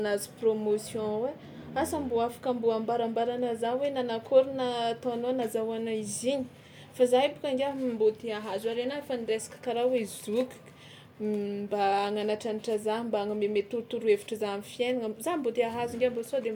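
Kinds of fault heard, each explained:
Nothing stood out as a problem on listening to the recording.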